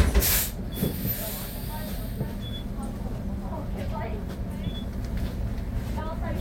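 From 1.89 to 3.44 s come CD scratch ticks. Seven short clicks recur about four times a second, once per disc turn. Each lasts a few milliseconds, where the player patches samples the scratch destroyed.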